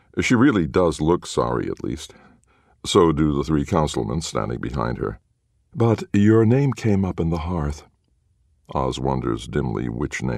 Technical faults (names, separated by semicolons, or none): none